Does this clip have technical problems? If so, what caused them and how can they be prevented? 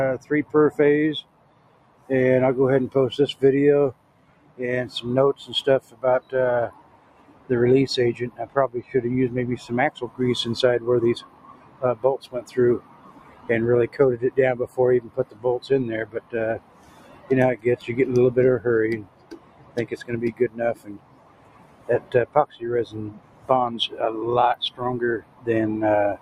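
Yes. A noise suppressor made for speech was left on, treating steady tones and ambience as noise, with level swinging around 20 dB. The waveform envelope pumps and tails collapse early. Bypass speech noise suppression for non-speech audio.

The sound is cut by the noise suppressor at 0.19–2.09 s, 3.34–10.19 s, 11.2–17.86 s and 19.03 s to the end, with drops of about 15, 16, 15 and 15 dB. Sustained parts sink while attacks survive, leaving dark gaps in spectrogram sustains. Disable suppression or use a music-aware mode.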